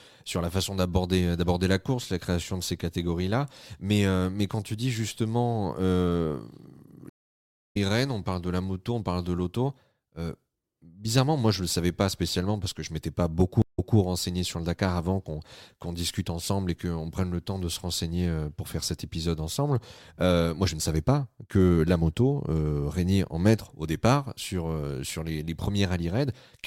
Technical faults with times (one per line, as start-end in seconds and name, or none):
7.09-7.77 stream reconnect
13.62-13.97 stream reconnect